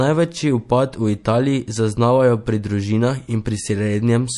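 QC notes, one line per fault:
throughout, MP3 compression: the speech has likely passed through an MP3 encoder at a low bitrate, which fits about 48 kbps. Short of bits, it discards everything above 11.3 kHz and drops weak frequency lines frame to frame, so the treble is dull and sibilants sound watery and swirly.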